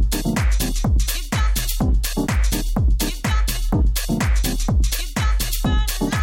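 No technical faults can be heard anywhere in the recording.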